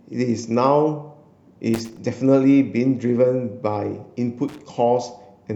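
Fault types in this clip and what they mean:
Loose connector crackle: A worn or dirty contact somewhere in the signal chain is making and breaking as it shifts. Each break chops the speech into fragments. Any DC on the line turns the jumps into pops. In this clip it comes in two short, irregular bursts of scratchy crackle. The first runs from about 1.74 to 2.02 s. The second is briefer, from 4.48 to 4.62 s.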